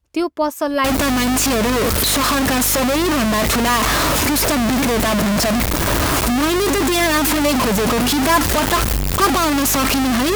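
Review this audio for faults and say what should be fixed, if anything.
Throughout the speech there is a steady 50 Hz buzz whose loudness tracks the signal level. This is a filter restarted on every block: each block begins from zero state and opens with a small transient, which fits roughly 20 ms blocks. Carry the filter state across block boundaries to prevent it.

From 0.84 s to the end, the audio turns heavily grainy, with distortion roughly as loud as the speech itself and quiet passages sputtering. The likely cause is low bit depth without dither: truncation to about 3 bits. Keep adequate word length and apply dither before any requantization.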